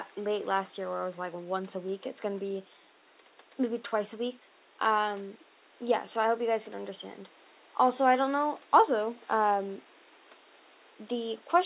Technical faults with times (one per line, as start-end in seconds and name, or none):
none